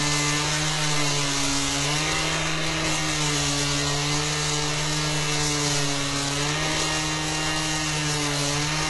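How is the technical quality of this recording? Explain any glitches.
The quality is poor. The damage runs the whole length of the clip. The top of the spectrum is gritty and metallic, with nothing above 11.4 kHz. This is likely HE-AAC compression, at a very low rate that fits about 12 kbps. The codec stores only the lower bands properly. It fakes the treble by copying lower bands upward and shaping them roughly. The copied highs do not match the real ones. So bright detail sounds synthetic and rough throughout.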